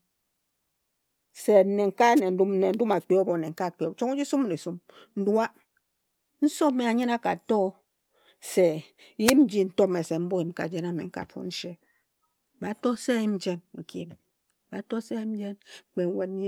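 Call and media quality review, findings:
Wireless microphone noise hits at 2.16–2.20 s and 9.24–9.34 s in the speech: short static swishes. Likely the FM radio link fading as reflections cancel, letting receiver noise through.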